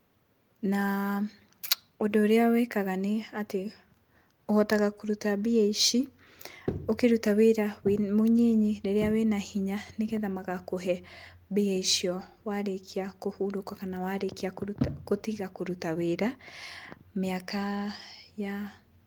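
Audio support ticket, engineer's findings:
No fault found in this speech clip; nothing to report in the engineer's findings.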